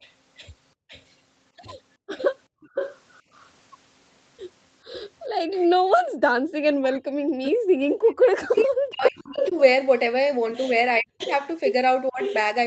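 From the start to 3.49 s there is an echo leak, likely because the far end's loudspeaker fed its microphone and the echo canceller let part of it through. A copy of the speech returns 442 ms late, roughly 15 dB below the direct voice, and is faint and trailing. Between 0.75 and 2.69 s the same canceller clamps the microphone as background gated by the echo canceller, with around 400 ms of dips in total reaching about 35 dB, so the room tone briefly vanishes and snaps back. Another gated gap, about 40 dB deep, falls at 5.3 to 5.51 s.

At 5.56 s the leak returns much stronger, with the copy again 442 ms behind and only about 5 dB under the speech, so it sits almost level with the original until 9.6 s. From 5.88 s to the end, speech is suppressed in double talk, likely because both sides spoke at once and the canceller could not separate its talker from the echo. The voice dips by up to about 40 dB, turning thin and broken in places. 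A short gating dropout of about 38 dB sits at 7.62 to 7.67 s. From 11.18 s to the end a third echo leak appears at a longer 538 ms delay, about 10 dB down. Nothing above 8 kHz comes through, which fits a wideband Opus call link at around 20 kbps.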